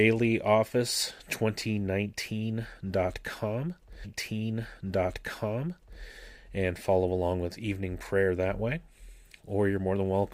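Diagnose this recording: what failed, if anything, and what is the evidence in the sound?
The streaming playback stage failed: the player fetched or queued the same stream segment twice, a stream segment repeated fault. From 4.04 s to 6.04 s the speech plays again, adding 2.0 s to the programme, with a blip at the point where it jumps back. Continuity resumes just before "and follow along with". Because the duplicate is a whole segment rather than a dropout or garble, the fault lies in segment delivery or queuing, not in the codec or capture chain.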